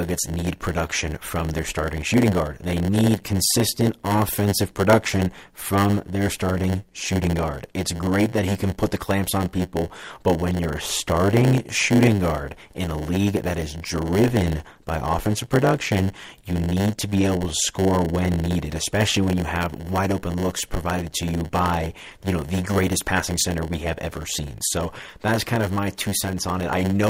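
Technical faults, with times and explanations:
Throughout, block size mismatch (padded): each block is topped up with zeros, chopping the speech into a steady 100 Hz buzz and stretching it to 0.919 of normal speed. Timbre stays normal, unlike a sample-rate error, and the gaps recur strictly regularly, unlike dropouts.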